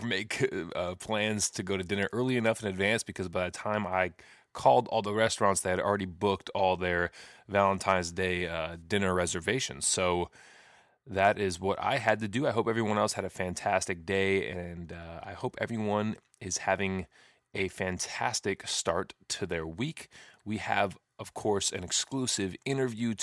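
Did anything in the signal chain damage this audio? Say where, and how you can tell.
No, there's nothing here that points to damage at any stage of the chain, so this speech recording seems to have come through untouched.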